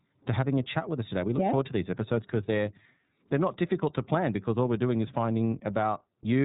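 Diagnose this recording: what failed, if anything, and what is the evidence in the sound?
Codec stage: iLBC codec throughout. The spectrogram stops flat at 3.8 kHz, and independently coded frames leave rough, synthetic speech, which fits 13.33 kbps with 30 ms frames.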